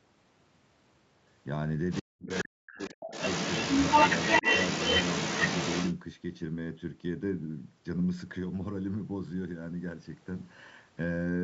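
Other side's voice leaking through appears in this speech clip at 1.9 to 2.02 s, about 15 dB below the talker, again at 2.29 to 2.44 s, only about 5 dB down, and then from 2.72 to 5.95 s, where the far voice runs about 5 dB louder than the near talker. The likely cause is a loudspeaker feeding back into the microphone with the echo canceller leaving a growing residue. Speech suppressed in double talk spans 2.01 to 3.1 s. With both sides speaking at once, the talker's level drops by roughly 40 dB at its deepest, for about a second of affected audio in total. This is likely the canceller failing to tell near speech from echo and attenuating everything during the overlap.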